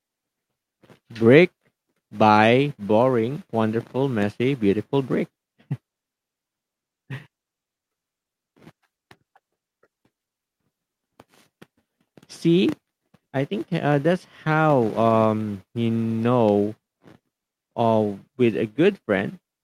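Listening to the speech recording, nothing stood out as a technical problem at any point.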